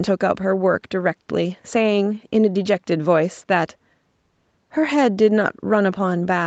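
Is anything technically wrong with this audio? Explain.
No, nothing technically wrong can be heard here.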